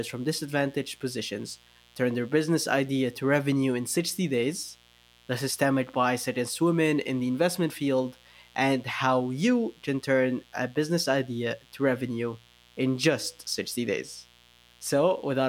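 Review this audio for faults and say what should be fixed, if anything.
A mains buzz runs under the speech for the whole clip, from start to finish, sitting roughly 30 dB below the voice. Its fundamental is 60 Hz, and the raspy edge comes from sharp switching spikes arriving twice per mains cycle, which spread energy across a dense ladder of 60 Hz harmonics reaching up into the several-kHz range. That is why it reads as a coarse buzz rather than a smooth hum. Because those harmonics overlap the speech band, a simple low-cut will not remove it. Prevent it by keeping microphone and line cabling shielded and well away from dimmers, rectifiers and switching supplies, and by grounding the recording chain to a single point.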